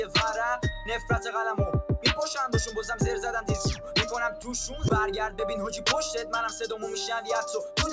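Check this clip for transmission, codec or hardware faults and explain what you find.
One fault stands out, heard over a call path whose G.722 coding leaves nothing above 8 kHz. From 3.76 to 3.95 s, a span of about 200 ms, the sound is cut by the noise suppressor. It mistakes that stretch for noise and pulls it down by about 7 dB at its deepest. The sound sinks in level rather than vanishing, which sets it apart from a packet-loss dropout.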